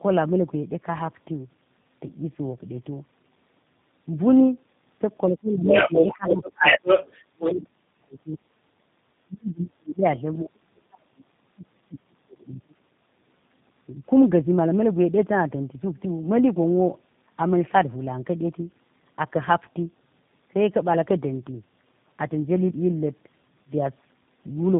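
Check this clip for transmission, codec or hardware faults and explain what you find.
The speech in this clip carries three faults: a constant codec coloration and a short stretch of echo trouble around 5.5 to 8.4 s.

Tandem speech coding runs throughout. The audio passed through two speech codecs in a row, ending in G.729A, and each one re-coded the previous one's losses. The result sounds rough, muffled and warbly. A spectrogram shows a hard ceiling near 3.8 kHz with smeared formants.

The other side's voice leaking through appears from 5.5 to 7.61 s. It is likely residual loudspeaker echo that the echo canceller missed. A second voice sits roughly 5 dB above the talker, and the waveform shows overlapping energy.

Speech suppressed in double talk occurs at 6.15 to 6.79 s and again at 7.6 to 8.41 s. It is likely the echo canceller ducking both voices while they overlapped. The talker dips by about 15 dB over roughly 400 ms, then by about 35 dB over roughly 700 ms, which shows as visible gaps in the waveform envelope.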